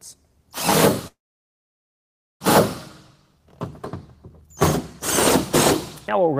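At 1.07 s a call audio freeze begins: a brief fading buzz, then about 1.25 s of silence until 2.42 s, likely from delayed packets draining the jitter buffer; audio resumes without loss.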